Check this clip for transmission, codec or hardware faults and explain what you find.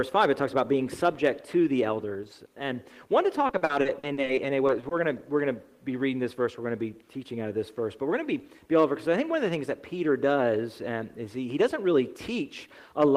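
One fault is present: from 3.47 s to 4.93 s the sound turns choppy and robotic, a case of repeated packet loss. About a dozen short holes, none over 40 ms, were patched by stretching the preceding sound, concealing roughly a quarter of that stretch.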